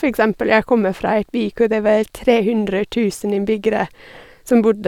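Nothing stood out on listening to this speech recording.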